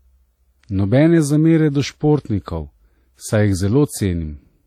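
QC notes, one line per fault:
Throughout: WMA compression, plainly audible ringing and washy smearing with hiss breathing alongside the speech, likely from a low bitrate around 48 kbps.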